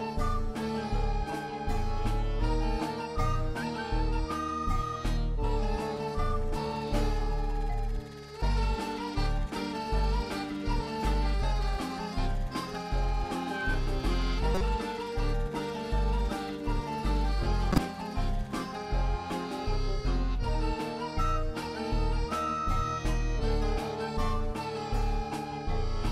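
Corrupt frames decoded at 14.55–14.61 s and 17.72–17.78 s put misplaced energy into short chirps, squeaks, blips or bursts of noise, peaking at about -15 and about -10 dBFS.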